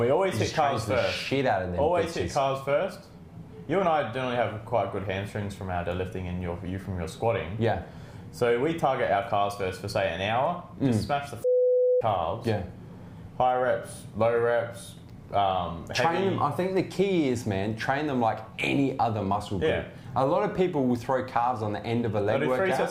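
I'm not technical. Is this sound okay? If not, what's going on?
No. Throughout the clip there's a steady buzz, the resampler restarted on every block. The audio was converted in 10 ms chunks, and each seam leaves a tiny tick, 100 per second. Unlike mains hum, it disappears whenever the sound goes quiet.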